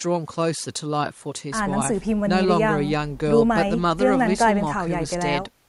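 Nothing stood out as a technical problem on listening to this speech recording.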